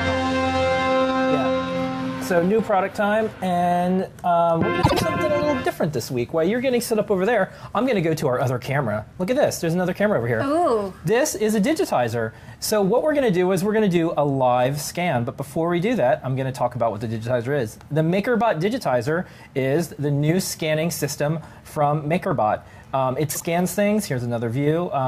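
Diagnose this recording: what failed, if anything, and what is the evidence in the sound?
Two brief garbled flutters, at 4.82 to 5.01 s and 23.30 to 23.43 s, are frames out of order, a network-stage fault ahead of the decoder. In each stretch two adjacent blocks play in swapped order, about 72 ms each in the first and 48 ms in the second, which fits runs of three and two 24 ms frames. The decoder renders the sound in that wrong order, so nothing is lost and the timing stays intact.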